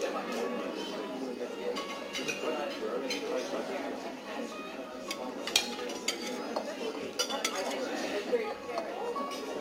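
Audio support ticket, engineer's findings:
Gritty, inharmonic fizz riding on loud and high content for the whole clip, roughly 20 dB under the signal. Crude rate conversion, with samples repeated rather than filtered, fitting a 44.1 kHz to 48 kHz step.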